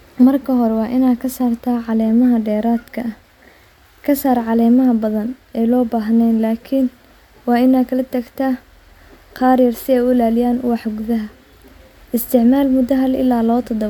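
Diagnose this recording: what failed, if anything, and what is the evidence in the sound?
Nothing failed in this recording, and the sound offers no evidence of any fault.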